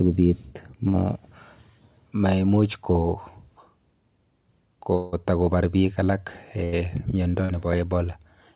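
Speech, carried over a call path whose band stops at 4 kHz, which fits G.711 mu-law at 64 kbps. Two bursts of packet loss occur, at 0.88 to 0.96 s and at 6.64 to 6.81 s. In each, consecutive packets failed to arrive, and the receiver extended the last sound as a decaying buzz or hiss, for about 58 ms and 81 ms respectively. When the signal resumes, roughly 60 ms and 80 ms of the original material are simply gone, so the audio jumps forward rather than picking up where it stopped. From 4.96 to 5.14 s the sound is replaced by a continued, fading tone lasting about 165 ms, never reaching silence, after which the speech returns with around 160 ms absent. The length and shape point to a long network dropout as the likely cause: an extended run of missing audio that the receiver covered by stretching the last sound out until fresh packets arrived. At 7.45 to 7.51 s there is a brief smear from short concealed packet loss. 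About 40 ms failed to reach the decoder in time, and the receiver patched the gap with roughly 36 ms of continuation built from the preceding sound before blending back into the real signal. The result is a short wobble in place of the lost material.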